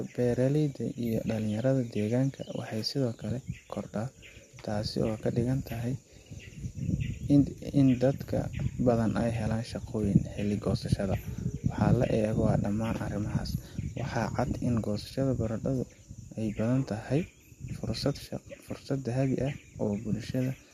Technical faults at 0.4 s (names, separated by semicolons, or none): none